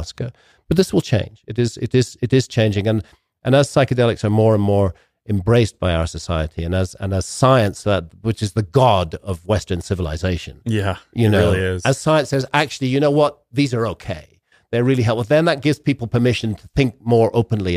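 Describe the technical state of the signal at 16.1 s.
At 16.1 s the speech signal is intact, with no technical fault present at that moment.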